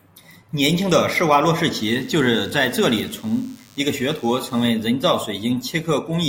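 From 1.91 s to 4.67 s, a DECT cordless phone buzz sits under the speech. A nearby handset or base is sending radio bursts 100 times a second, and the audio circuit rectifies them. The result is a thin, steady 100 Hz buzz, rich in harmonics, roughly 30 dB below the speech.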